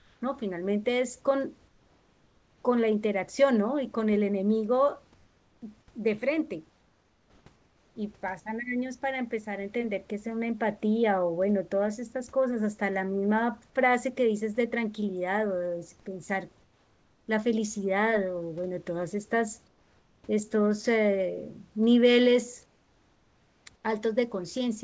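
Speech in which the pauses lose their real room background and go flat: at 0.0, 1.68, 6.70, 7.56, 16.62, 19.68, 22.66 and 23.76 s the background becomes a steady, featureless hiss, about 2 to 6 dB quieter, for between 0.08 and 1.0 s. This is comfort noise in place of the background, likely from discontinuous transmission, where the receiver fills gaps with synthetic noise. The audio also has nothing above 8 kHz, consistent with a G.722 call path.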